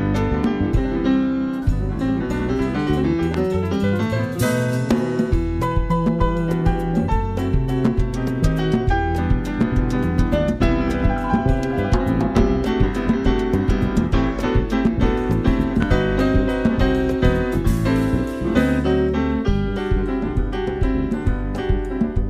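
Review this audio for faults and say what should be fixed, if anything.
A sudden voltage step, likely from a plug, switch or static discharge, entered the signal twice, at 3.34 to 3.36 s and at 15.82 to 15.85 s. Each produces one sharp loud pop, roughly 10 dB above the surrounding audio, while the sound continues underneath. Securing connectors, muting before switching equipment, and grounding the setup against static would prevent it.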